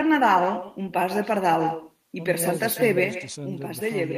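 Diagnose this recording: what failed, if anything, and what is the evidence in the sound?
Call processing failed first. Every phrase from start to finish carries an echo with no canceller behind it, a copy about 10 dB down that trails the talker by something like 150 ms. That's the signature of the far end playing the call over a loudspeaker, its microphone catching it, and the whole thing riding back across the network with nothing subtracting it, so each word gets a thinner shadow a beat later.

Then at 3.04 s there's a sudden gain jump. The level steps down by about 6 dB in one go and stays there to the end, with the background noise dropping right along with the speech, which tells you it's a digital scaling change rather than the talker backing off the mic. Most likely a gain setting or bit shift got applied in the driver or processing chain without any ramp.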